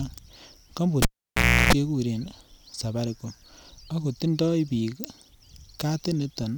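Cable pulled and plugged in, from 1.02 to 1.73 s: a live lead is yanked out mid-speech and reinserted. A pop marks the break at 1.02 s, and the signal drops to near silence for about 0.65 s. With only the tip making contact, a 60 Hz mains buzz lasting about 0.34 s comes through, since the shield isn't yet grounded. A second pop at 1.73 s marks the speech returning once the plug seats fully.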